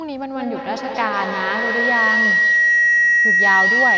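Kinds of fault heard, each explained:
Feedback howl: from 0.35 s to the end of the clip, a tone of roughly 2 kHz rises out of the speech and swells until it sits about 6 dB above it. Two devices in the same room are joined on one call, so sound from one loudspeaker re-enters the other microphone and gains level on each round trip. That loop lasts about 200 ms, and repetition has narrowed it to the frequency it favours.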